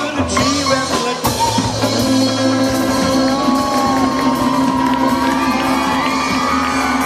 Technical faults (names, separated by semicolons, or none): none